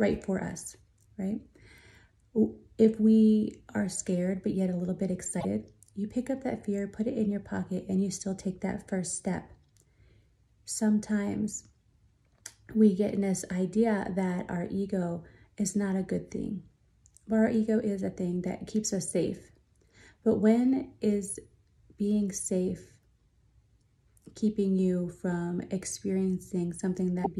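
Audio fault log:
5.37 to 5.45 s, damaged data in a compressed stream: a brief glitch lasting about 80 ms. Corrupted bytes made the decoder misread frames and lose sync, and it hunted for the next frame header.
27.21 to 27.27 s, damaged data in a compressed stream: a shorter blip of about 60 ms near the end. The same loss of frame sync produced the blip.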